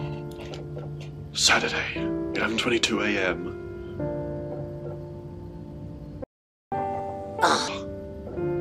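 At 6.24 s the sound just drops out and stays silent until 6.72 s, a gap of about 480 ms, before picking up again. That's a playback stall. The cause is likely the player running dry on buffered data, or its output thread getting held up, so nothing reached the output for that half-second. It's a clean hole rather than a glitch or click, which makes it very noticeable mid-flow.

Right after, from 6.72 s to 7.68 s, you get catch-up at higher speed. The player is burning through the backlog it built up during the gap by resampling it at 1.5 times normal speed. Because it's resampling rather than time-stretching, the pitch goes up with the speed, by roughly seven semitones, so that stretch sounds hurried and chipmunk-ish. Once the lost time is recovered it drops straight back to normal speed and pitch.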